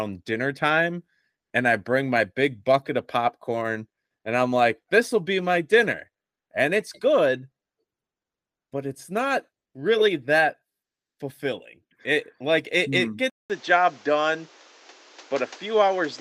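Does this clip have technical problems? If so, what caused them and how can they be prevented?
Yes. After "it mm it hmm", at 13.30 s, the speech cuts out for about 200 ms. From there to the end at 16.21 s it sounds duller and boxier. Nothing is heard above about 7.9 kHz. The level shifts by a few dB, and a new noise floor sits well below the speech. This is likely an input switched to a poorer device, such as a narrower-band microphone. Preventing it means locking the input device before recording and disabling automatic device switching.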